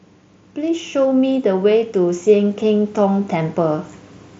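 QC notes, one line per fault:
0.55–3.92 s, automatic gain rising: speech and background swell together by about 8 dB as automatic gain control, judging the headset input too quiet, gradually raises its gain.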